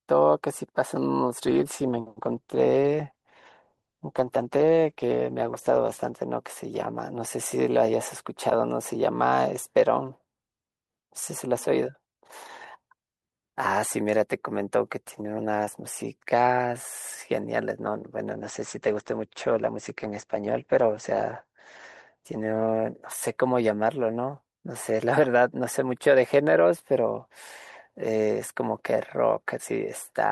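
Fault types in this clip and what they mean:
call bitrate drop: twice the sound turns rough and watery but never breaks up, unlike packet loss; the second drop also muffles it, losing everything above 8 kHz.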